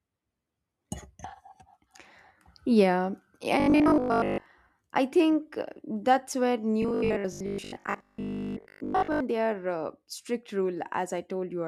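From 3.60 to 4.46 s, before "I think uh that's", and from 6.82 to 9.20 s, before "they are uh strict", speech turns into a rigid metallic 50 Hz buzz. This is likely robotic sound from repeated short buffers, with a 20 ms chunk looping while most of the real audio is skipped.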